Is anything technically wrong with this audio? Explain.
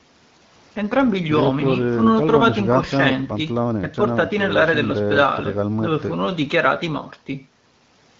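No, nothing in this speech recording points to a technical fault. It carries the band-limited character of the AMR wideband (HD Voice) codec at 12.65 kbit/s, a rate where that codec keeps speech clear and leaves only light coding traces.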